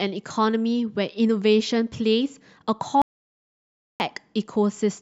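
A speech recording with an audio dropout to silence from 3.02 to 4.0 s, losing about 0.98 s. The sound cuts off mid-flow into silence with no room tone, which separates it from a natural pause or gating, and likely comes from a momentarily lost input.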